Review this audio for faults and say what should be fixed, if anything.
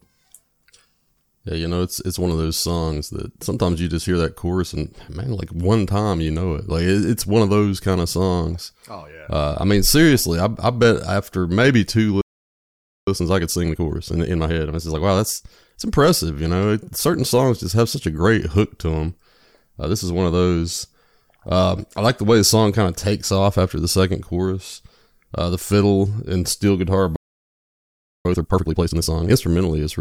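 Playback stall: the player likely ran out of buffered data or had its output thread blocked, so the speech stops mid-flow for about 0.86 s from 12.21 to 13.08 s, right after "after maybe two", and for about 1.09 s from 27.16 to 28.25 s.

Time-compressed catch-up: after each stall the player shortens its backlog by cutting out short slices and cross-fading the joins. The speech sounds hurried at normal pitch, at 1.15 times speed from 13.08 to 16.08 s, ending at "you know", and at 2 times speed from 28.25 to 29.33 s, after "fiddle and steel guitar".

To prevent both, give the playback thread priority and a deeper buffer so it never starves, and cap catch-up speed or spread it over a longer time.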